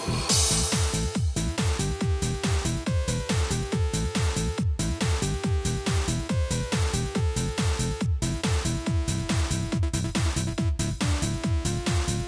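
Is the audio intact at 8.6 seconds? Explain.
Yes, the audio is intact at 8.6 seconds, with no dropout, click, glitch or other fault at that moment.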